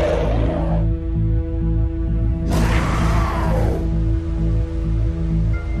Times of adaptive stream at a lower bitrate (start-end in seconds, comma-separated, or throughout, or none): none